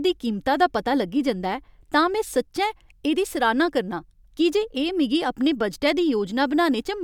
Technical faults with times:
none

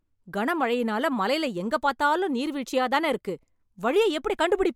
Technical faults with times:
none

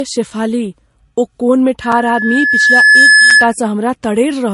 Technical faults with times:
0.00-4.53 transcoding between lossy codecs
1.81-3.54 loudspeaker feedback squeal
1.92 block of digital silence
3.30 block of digital silence

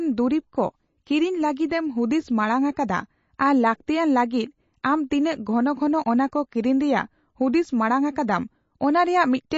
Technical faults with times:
0.00-9.58 MP3 compression

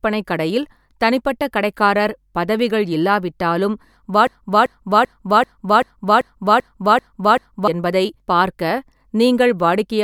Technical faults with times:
4.27-7.68 broken-record loop

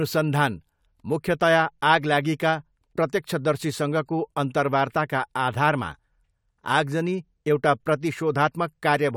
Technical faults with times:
none

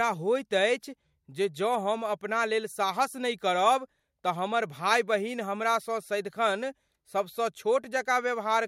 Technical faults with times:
none

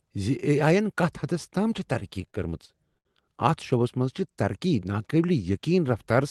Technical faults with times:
1.93-3.07 repeated stalls (stutter)

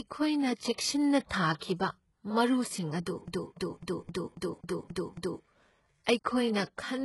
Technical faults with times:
0.00-7.04 HE-AAC compression
1.27-1.31 pre-echo
3.27-5.44 CD stuck on one turn

